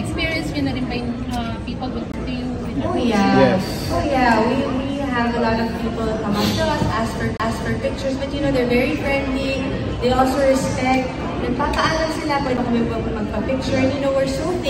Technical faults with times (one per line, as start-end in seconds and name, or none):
2.12-2.14 CD skip
7.37-7.40 CD skip
12.57 CD skip